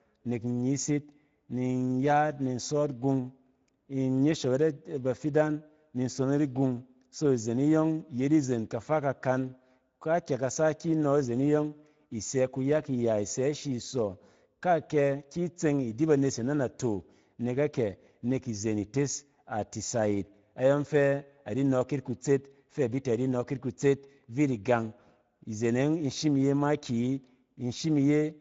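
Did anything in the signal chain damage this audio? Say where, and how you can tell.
Yes. Speex codec damage runs through the whole speech clip, at the codec stage. The speech has a plainly audible grainy, hoarse texture throughout, and nothing is present above 7.7 kHz, which points to a wideband Speex encode at a bitrate of about 17 kbps. The codec's CELP model spends too few bits on the excitation signal at that rate, so the fine detail of the voice is replaced by coarse, noisy approximations.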